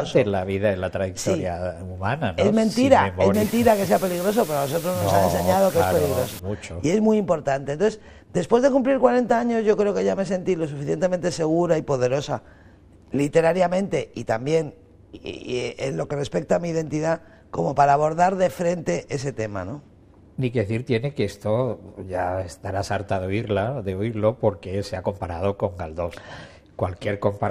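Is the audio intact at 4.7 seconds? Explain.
No. At 4.7 seconds the audio sits inside a stretch of low bit depth with dither running from 3.34 to 6.39 s. Here the signal is carried on only 6 bits, and dither was added before rounding, which turns the coarse quantisation error into steady white noise instead of distortion. The result is a constant, even hiss around 15 dB below the signal, with no gritty or harmonic distortion.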